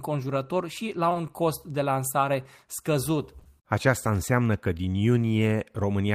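At 1.09 to 1.13 s, 1.13 to 1.17 s, 3.39 to 3.43 s and 3.43 to 3.47 s, short concealed packet loss occurs. Each time, 20 ms of speech failed to arrive and the receiver extrapolated from the preceding audio, producing a brief smear or wobble.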